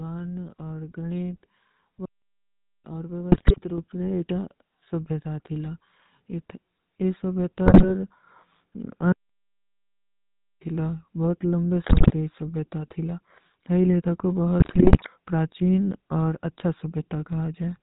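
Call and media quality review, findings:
GSM full-rate codec, throughout: buzzy, gravelly speech, nothing above 4 kHz; pulse-driven vocal-tract model keeps a third of excitation samples, consistent with 13 kbps full rate.

Playback stall, 2.05–2.85 s (0.79 s) and 9.12–10.61 s (1.49 s, ending before "ଥୀଲା ବହୁତ"): output goes silent mid-flow, then resumes; likely player starved of data or thread blocked.

GSM bit errors, 3.32–3.59 s, 7.66–7.90 s, 11.84–12.12 s, 14.60–15.07 s (after "ଲେଥା କୋ"): squawks, pops, gargling; corrupted filter, pitch, gain parameters distort spectrum and level per frame.

Microphone volume stepped up, 3.78 s (about +6 dB), 7.47 s (about +2 dB), 8.49 s (about +1 dB): speech and background jump together; call software raising device input gain in single steps.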